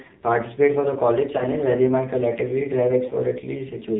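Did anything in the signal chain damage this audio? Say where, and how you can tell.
Yes. The codec stage did it. Nothing above 4 kHz survives, and the speech sounds heavily buzzy and synthetic throughout. That is the AMR narrowband mobile codec at a low rate, which fits a 5.9 kbps mode. Its sparse pulse model flattens the voice.

The radio link also caused lost AMR speech frames. A brief dip or warble occurs at 1.38 s and at 3.08 s. Each fits one missing 20 ms frame. The decoder covered each gap by reusing the last good pitch and vocal tract settings at falling gain.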